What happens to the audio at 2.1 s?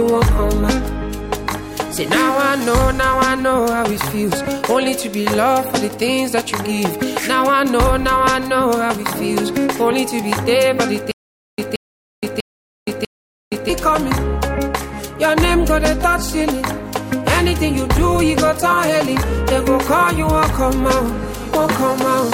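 Nothing goes wrong at 2.1 s; the audio plays through that moment intact, with no dropout, click, distortion or other fault.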